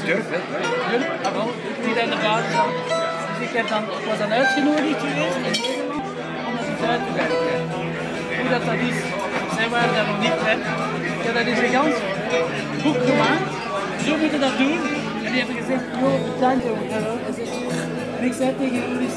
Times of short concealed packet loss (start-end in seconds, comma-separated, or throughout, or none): none